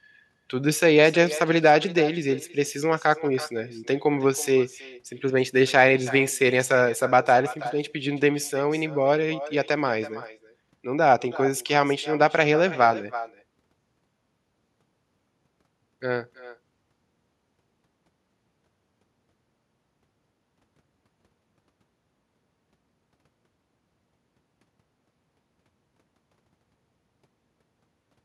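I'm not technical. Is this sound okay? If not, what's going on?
No, there's echo with no canceller running through the whole clip. The far end is playing the call out loud, their microphone catches it, and nothing strips it out, so everything this talker says comes back about a third of a second later as a fainter, thinner copy.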